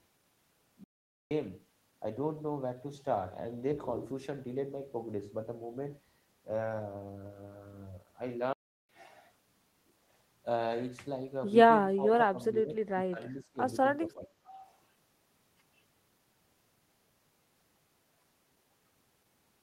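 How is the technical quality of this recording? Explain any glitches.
The recording has two kinds of glitch: two brief dropouts early and midway, and a stretch of choppy, ducked speech shortly after the midpoint.

From 0.84 to 1.31 s, and again from 8.53 to 8.89 s, the speech stops dead mid-flow, for about 0.47 s and then 0.36 s, before carrying on. These are most likely playback stalls: the player ran short of buffered data or its thread was held up, so the output fell silent until audio arrived again.

Between 11.96 and 12.76 s, 12.92 and 13.59 s, and 14.01 and 14.56 s, the voice repeatedly dips, thins and breaks into pieces. The deepest drops are around 15, 25 and 20 dB, with roughly half a second affected in each burst. This is likely speech suppressed in double talk: with both ends talking at once, the echo canceller confused this talker with loudspeaker echo and attenuated the voice along with it.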